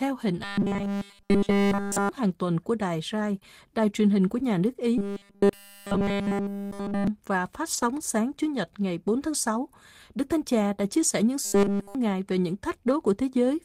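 Speech, with three kinds of fault. A robotic sound from repeated short buffers covers 0.44 to 2.09 s, ending just before "hàng tuần của đài", then 4.98 to 7.07 s, between "hình của nhà nước" and "và phát", and 11.45 to 11.95 s. The sound turns into a rigid metallic buzz at 200 Hz. This is likely caused by the player repeating a 5 ms buffer, with nearly all of the real audio skipped. A lost packet rebuilt from error correction shows up at 3.31 to 3.37 s, which fits two lost packets, and over 60 ms at 7.73 to 7.83 s, right after "và phát", and at 10.93 to 11.03 s. The decoder played low-bitrate copies, so there is no gap, but those moments sound rougher and noisier. A short concealed packet loss follows at 3.39 to 3.43 s. About 20 ms never arrived, and 16 ms of it was filled by continuing the last sound. It is heard as a brief smear.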